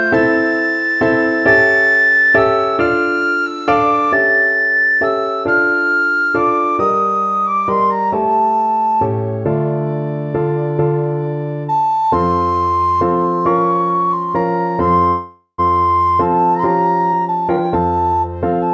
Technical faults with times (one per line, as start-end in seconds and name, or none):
15.08-15.60 call audio freeze
17.13-18.67 jitter buffer speed-up